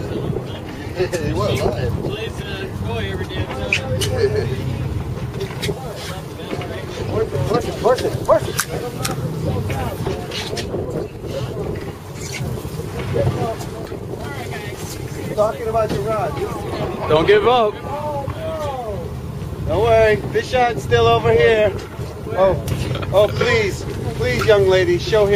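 No technical faults can be heard in the clip.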